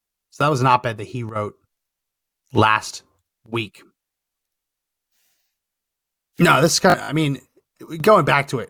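Bluetooth stutter hits this speech clip from 6.90 to 7.09 s, between "this is" and "I mean". Data arrived late or not at all, so the receiver kept replaying its last short slice of buffer, giving a buzzing, machine-gun repeat. About 93 ms of audio goes missing across that 187 ms stretch, with the longest gap 56 ms, which fits around five dropped packets. Playback then resumes further along, as if it had played on.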